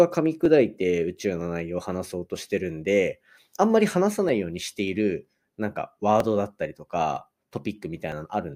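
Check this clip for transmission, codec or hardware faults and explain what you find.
A click recurs at a steady pace, about every 0.96 s, from 0.45 s to 8.12 s, roughly ten times while the speech runs. This regularity points to clock drift buffer slips, likely from two devices running on independent clocks that disagree by several hundred parts per million. The buffer between them gradually over- or under-fills, and at each slip a small block of a few dozen samples is dropped or repeated, causing the brief discontinuity heard as a click.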